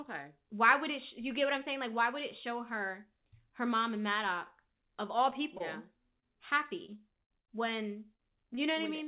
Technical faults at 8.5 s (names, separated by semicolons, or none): short concealed packet loss